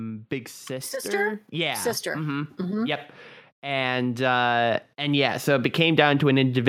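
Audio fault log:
0.28–3.08 s and 3.61–6.64 s, automatic gain rising: twice the level control judged the speech input too quiet and stepped its gain up slowly, by about 6 dB then about 7 dB, so voice and background noise swell together over roughly three seconds each time.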